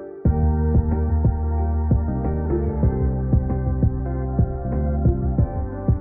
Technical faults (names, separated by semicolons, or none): compressed frames skipped